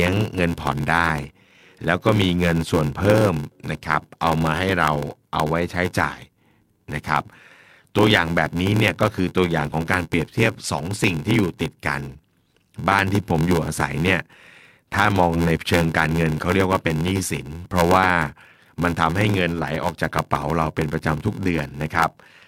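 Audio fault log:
Throughout: block size mismatch (padded), short writes zero-filled to what fits a 512-sample read, giving an 86.1 Hz buzz and speech slowed to 0.861x at about normal pitch.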